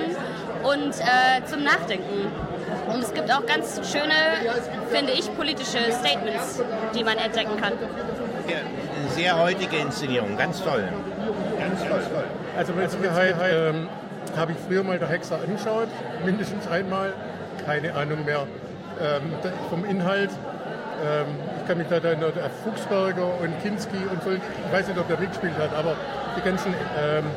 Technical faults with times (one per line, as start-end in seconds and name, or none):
11.33-13.53 doubled audio track